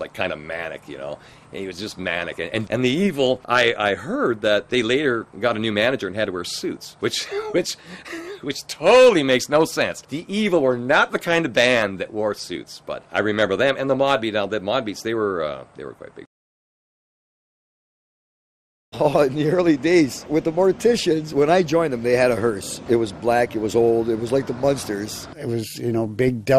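MP2 compression damage runs throughout, plainly audible. The sound is dull, with a gurgling, granular texture as upper sub-bands switch on and off and the remaining bands are coarsely quantised. This likely comes from MPEG Layer II encoding, and fits a starved bitrate near 80 kbps.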